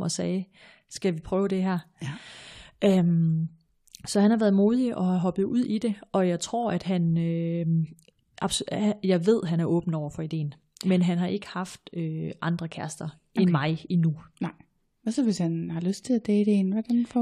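No technical faults can be heard anywhere in this speech recording. Nothing in how the sound was captured or delivered calls for comment at any point.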